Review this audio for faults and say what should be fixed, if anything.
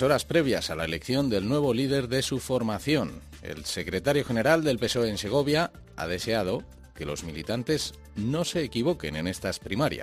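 Crude rate conversion runs throughout the clip. Samples were dropped without a proper anti-aliasing filter, which fits a 48 kHz to 44.1 kHz conversion. The recurring error pattern, roughly 25 dB below the signal, adds a gritty, inharmonic fizz that tracks loud and high-frequency sound. Prevent it by resampling with a band-limited polyphase or windowed-sinc converter.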